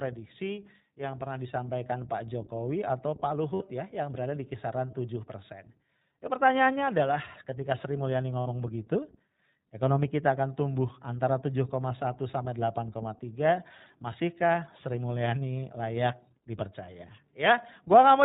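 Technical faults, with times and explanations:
Throughout: iLBC codec. Nothing above 4 kHz survives, so the speech sounds narrowband, clearly rough and slightly synthetic. Each short frame's excitation is coded independently at low rate, and the texture points to iLBC's 15.2 kbps mode with 20 ms frames.
3.54–3.62 s and 8.40–8.48 s: lost iLBC frames. Each gap lasts about 60 ms, which fits three lost 20 ms frames. The decoder fills it by repeating the last pitch cycle mixed with noise, heard as a brief held, buzzy vowel, and normal speech returns almost at once.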